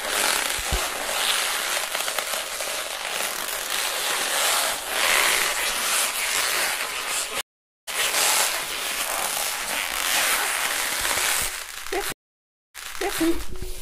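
At 7.41 s a stream reconnect cuts the sound for 463 ms, and playback resumes at 7.89 s about half a second further on, skipping material. At 12.12 s a second reconnect brings 622 ms of silence, then a fresh decoder restarts 464 ms earlier, repeating audio until 13.21 s.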